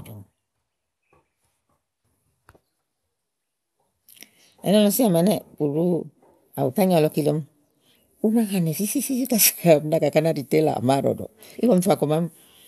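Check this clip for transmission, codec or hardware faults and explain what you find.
No faults can be heard anywhere in this speech.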